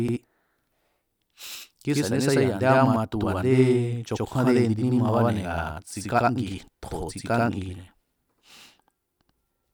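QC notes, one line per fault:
Throughout, channel delay (doubling): one channel runs 85.33 ms late, so the mono sum repeats each sound as an equal-level slap. The waveform and spectrogram show every onset duplicated.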